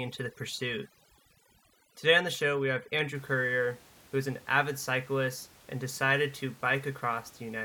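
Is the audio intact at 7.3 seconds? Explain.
Yes, the audio is intact at 7.3 seconds, with only the room's own background noise sitting well beneath the speech, about 26 dB down.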